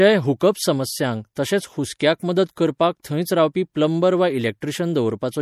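Speech runs throughout with plainly audible MP3 compression damage as the likely cause: a watery, swirling texture and chirpy s sounds, which fits a bitrate around 64 kbps. Unlike broadband noise or plain low-pass filtering, the artefacts flicker from moment to moment. At 3.02 s, just before "थंयच रावपी प्लंबर वा", there is pre-echo: a brief hiss spread over about 19 ms ahead of a sharp onset, which then sounds softened. It differs from a click or a reverb tail because the smear precedes the attack rather than following it.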